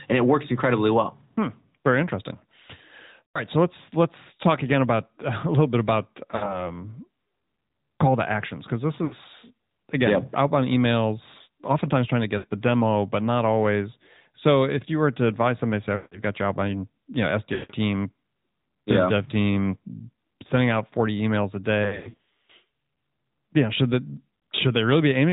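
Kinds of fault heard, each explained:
AMR narrowband mobile codec: The speech is cut off above 4 kHz and sounds buzzy and synthetic throughout, consistent with narrowband mobile coding at about 10.2 kbps.
Lost AMR speech frames: Eight dropouts between 3.29 and 24.40 s where the decoder extends the last sound and fades it. The worst is a broken, smeared stretch from 21.84 to 22.51 s.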